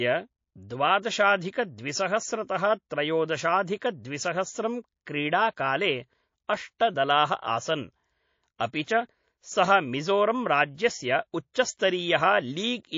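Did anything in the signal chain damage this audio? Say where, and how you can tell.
Yes. MP3 compression runs throughout at the codec stage: watery, swirly speech with dulled treble, which points to a bitrate around 32 kbps, likely from low-bitrate encoding.

Clock slip clicks appear from 0.14 to 12.6 s, faint ticks about every half second, likely from two unsynchronised converter clocks drifting roughly 40 ppm apart, slipping one sample each time.

Pre-echo sits at 8.85 s, also at the codec stage. A 32 ms hiss about 19 dB above the floor precedes an attack, as block quantisation noise spreads backward before it.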